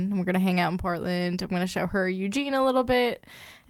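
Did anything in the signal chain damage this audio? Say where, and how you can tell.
No, nothing in the chain audibly damaged this speech.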